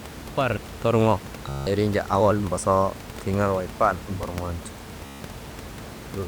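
Speech with a buzzy, machine-gun stutter at 1.49 to 1.67 s, right after "far torŋo", and again at 5.06 to 5.21 s. It's Bluetooth stutter: late or lost packets made the receiver loop its last short slice, then skip ahead, dropping about 170 ms and 150 ms.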